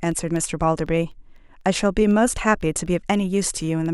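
From 0.12 s to 3.86 s, periodic USB or driver dropouts recur every 0.25 s: a recurring interruption of the transfer drops a tiny fraction of a millisecond of speech each time, leaving silence. The metronomic spacing sets these ticks apart from random clicks.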